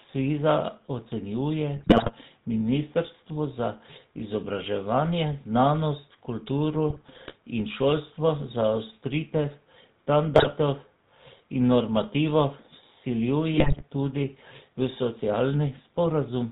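Across the whole clip the speech carries the GSM full-rate codec's plainly audible damage. Nothing reaches above 4 kHz, and the voice has a buzzy, gravelly texture, which fits a 13 kbps full-rate stream. A plain telephone band-limit would only dull the sound. This grit comes from rebuilding the excitation from a coarse pulse train, with just every third sample kept, driving a modelled vocal tract.

Four bursts of GSM bit errors then break through, at 1.77 to 2.11 s, 6.90 to 7.35 s, 10.34 to 10.53 s and 13.54 to 13.86 s. Corrupted filter, pitch and gain values reach the decoder, so frames come out with a warped spectrum or a sudden jump in level. The speech breaks into squawks, pops and gargling. Packet loss would leave gaps or smoothed-over repeats instead, while these bursts actively produce wrong, harsh sound.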